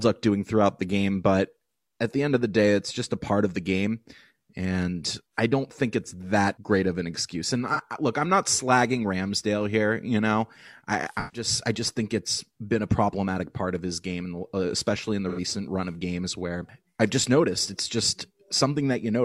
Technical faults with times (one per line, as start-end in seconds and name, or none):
7.73-7.80 AAC frame loss with concealment
11.19-11.47 AAC frame loss with concealment
15.28-15.39 AAC frame loss with concealment